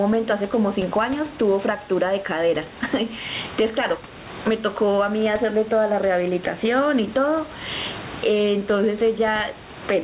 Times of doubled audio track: none

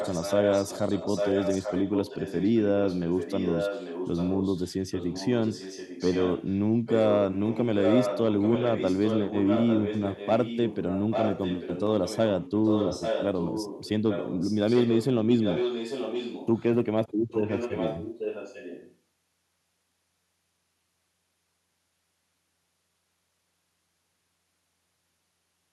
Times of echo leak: 0.00-15.06, 15.40-16.64, 17.31-18.96

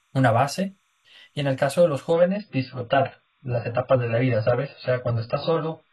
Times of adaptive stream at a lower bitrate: 2.13-5.93

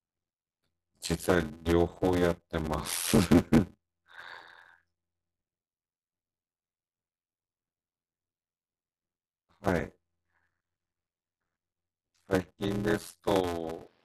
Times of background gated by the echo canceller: none

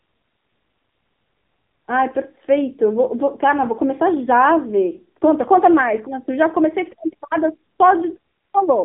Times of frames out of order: none

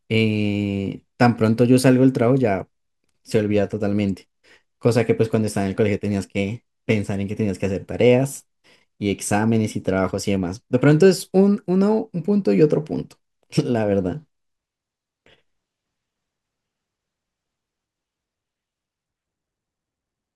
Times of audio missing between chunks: 3.32, 9.31

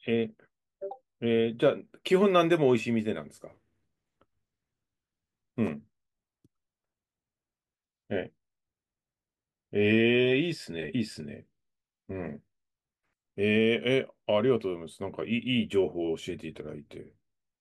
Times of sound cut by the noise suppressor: none

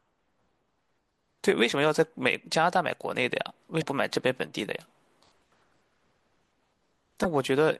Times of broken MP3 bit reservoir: 3.80-3.83, 7.22-7.25

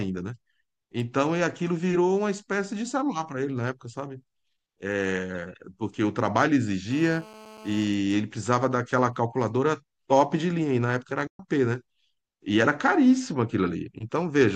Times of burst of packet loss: none

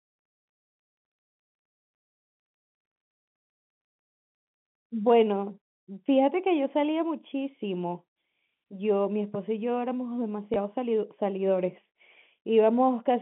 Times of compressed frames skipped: none

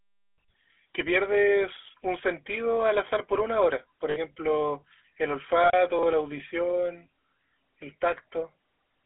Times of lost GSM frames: 4.10-4.18, 5.64-5.72

